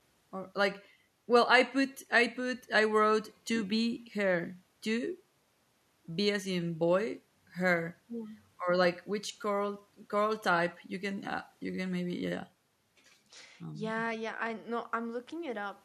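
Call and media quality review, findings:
No audible faults found in the speech; nothing to action.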